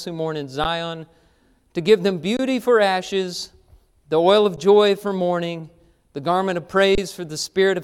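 The output buffer in this speech clip ran dry four times, an underrun with held sample. Each time, the converter froze on its last value, so the sound flattens briefly: at 0.64 s after "who mourn in", 2.37–2.39 s between "to give them" and "for ashes the oil", 4.56 s after "ashes the oil of", and 6.95–6.98 s. The 12 ms and 23 ms gaps fit 512- and 1024-sample buffers. Playback then resumes where it stopped, with only a soft join.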